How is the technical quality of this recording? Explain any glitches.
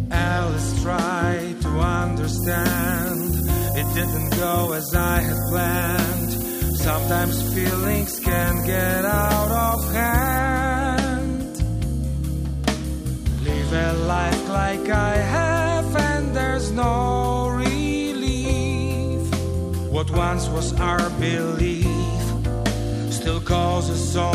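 There's one clear problem, and it's a big one while it lasts. From 2.39 to 10.39 s the audio drops to low bit depth with noise shaping: only 5 bits, with the rounding error pushed upward, so a thin, bright hiss almost as loud as the sound itself rises sharply toward the top end.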